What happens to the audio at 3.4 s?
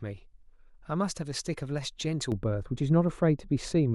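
At 3.4 s the speech is inside a stretch of de-emphasis applied wrongly, running from 2.32 s to the end. A treble cut meant to undo pre-emphasis lands on audio that lacked it or is applied twice, sloping smoothly down to about 11 dB at 10 kHz, so the sound turns dull and muffled. Unlike a low-pass filter's abrupt cutoff, the loss is gradual.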